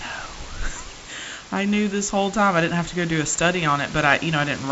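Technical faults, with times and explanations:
No technical faults occur in this speech clip. Room noise sits about 15 dB below the speech, and the G.722 wideband telephone coding at 48 kbit/s leaves nothing above 7.7 kHz, with only light coding noise.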